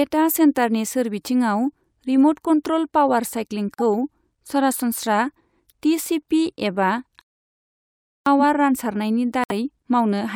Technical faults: corrupt frame muted; playback stall

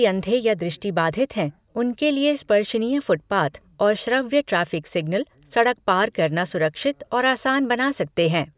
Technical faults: none

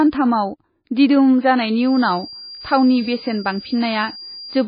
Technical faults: MP3 compression; feedback whistle

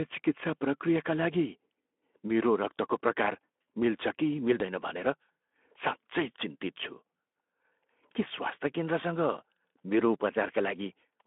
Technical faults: none

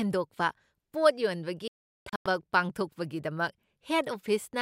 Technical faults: digital broadcast dropout

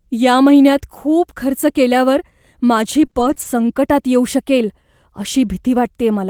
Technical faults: repeated packet loss (robotic sound)

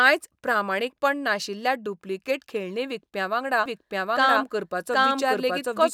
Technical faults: doubled audio track

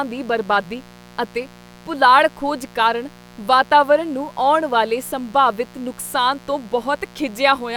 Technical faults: mains buzz

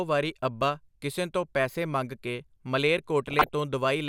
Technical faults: DAB burbling

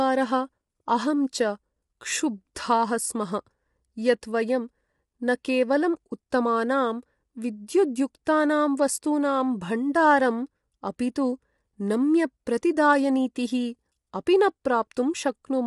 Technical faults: low-delay AAC compression

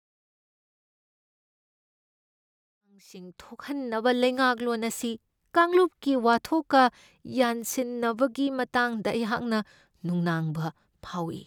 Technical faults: none

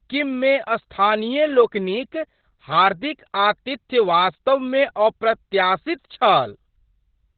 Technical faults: Opus voice compression

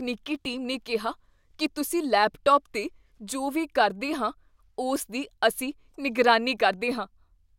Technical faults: none

